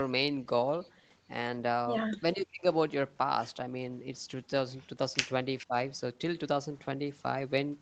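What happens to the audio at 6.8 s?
Nothing goes wrong at 6.8 s; the speech carries on intact through that moment.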